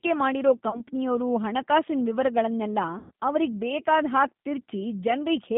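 The whole call passes through the G.729 codec at 8 kbit/s, which rebuilds the speech from a vocal-tract filter and a few pulses per frame within a 150 Hz to 3.7 kHz band. The voice sounds thin, rough and plainly synthetic. From 0.70 to 0.83 s, VoIP packet loss concealed by the speech codec occurs: about 30 ms of audio is missing, and the decoder extrapolates a brief smear of buzz or coloured noise that fades. From 2.99 to 3.11 s, just after "ಹಣಕಾಸಿನ್ ವಿವರಗಳ್ನೆಲ್ಲ", a longer 120 ms gap, which fits several consecutive lost packets, stretches into a decaying buzz or coloured noise before the speech recovers.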